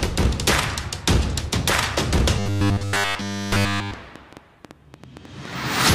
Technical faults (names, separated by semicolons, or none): train of clicks; robotic sound from repeated short buffers